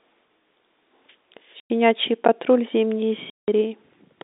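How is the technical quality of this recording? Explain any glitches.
The recording has three glitches: two dropouts from packet loss filled with silence and one short underrun with a held sample, all on a G.711 telephone line that sounds narrowband, as expected.

Packet loss filled with silence, at 1.6 to 1.7 s and 3.3 to 3.48 s: lost packets were replaced with silence, leaving 100 ms and 180 ms holes (consistent with 20 ms packets) with hard edges.

Underrun with held sample, at 2.28 s: the output buffer ran dry for about 11.6 ms, which fits a 512-sample buffer. The level freezes flat and then picks up where it stopped, so you get a soft hiccup, not a click.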